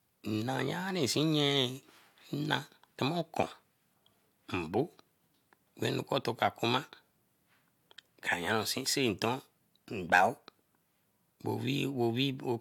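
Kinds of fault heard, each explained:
No kinds of fault are heard in this speech clip.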